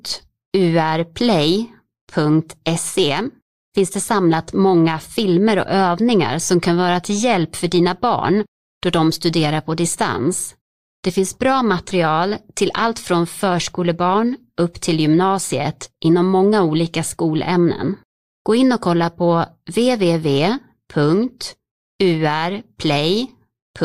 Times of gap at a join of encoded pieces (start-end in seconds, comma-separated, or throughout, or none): none